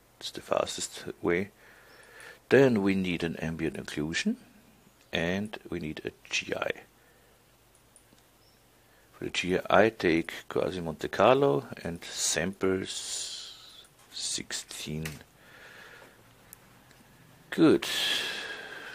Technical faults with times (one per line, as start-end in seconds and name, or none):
none